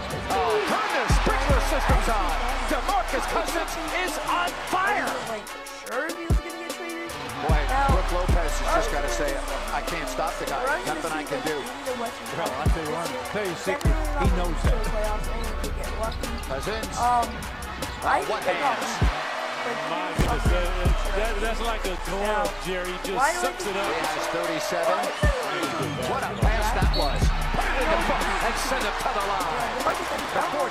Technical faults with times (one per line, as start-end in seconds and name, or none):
20.16-20.33 processor overload crackle
29.86-30.45 processor overload crackle